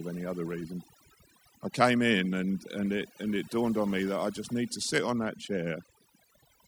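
Right from the start and running the whole way through, there's a steady USB whine sitting at 1 kHz, roughly 30 dB below the speech. That pitch is the giveaway: the bus pulls current in 1 ms frames, and that rhythm leaks into the audio through the power or ground wiring, so you get a fixed tone at exactly a thousand cycles. It doesn't drift or wobble. It just hangs there under everything, thin and nagging.

Layered over the whole clip you've also got overdone noise removal. Someone cranked a noise reduction tool too hard, so any frequency band that dips close to its idea of the noise gets pulled way down or switched off entirely, and the quieter bits of the voice get dragged out with it. The background drops and breaks up into little twinkly, chirpy specks.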